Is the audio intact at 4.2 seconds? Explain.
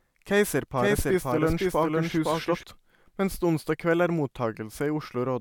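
Yes, the speech at 4.2 seconds is intact, with no fault audible at that moment.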